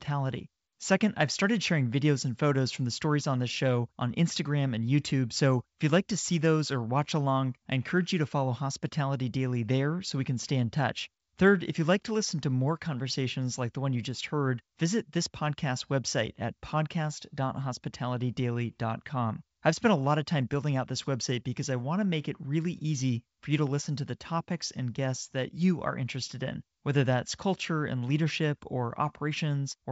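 Nothing goes wrong anywhere in this speech recording, which just carries the familiar character of G.722 wideband telephone coding at 64 kbit/s, with the sound topping out at around 7.7 kHz.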